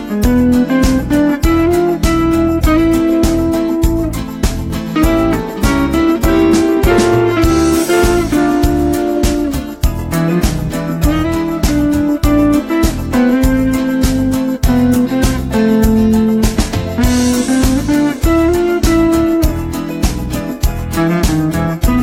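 No technical faults can be heard anywhere in this audio.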